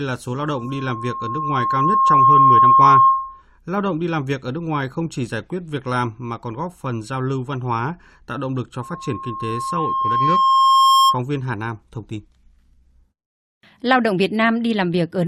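At 0.38 s, just after "là số", loudspeaker feedback squeal begins. The microphone is picking up the loudspeaker it feeds, and at 1.1 kHz the loop gain passes one. A single tone swells over about two seconds until it sits roughly 10 dB above the speech, then stops at 3.42 s. The same squeal returns at 8.82 s, after "tạo động lực cho", at the same 1.1 kHz pitch. It builds the same way and ends at 11.20 s.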